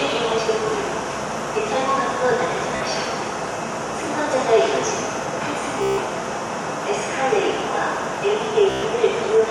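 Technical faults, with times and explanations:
2.76–2.82 s, 5.82–6.00 s, 8.70–8.84 s: Bluetooth stutter. Late or lost packets leave the receiver looping its last short buffer, giving a buzzing repeat while about 46, 152 and 122 ms of audio are lost. Unlike a dropout, there's no silence, and the sound resumes further on, as if it had kept playing.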